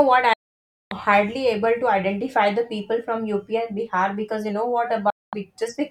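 Speech with two digital broadcast dropouts: the receiver lost valid frames and muted, cutting to silence within about 3 ms from 0.33 to 0.92 s and from 5.10 to 5.33 s. Spectrograms show blank vertical gaps, waveforms flat lines, and that audio is gone.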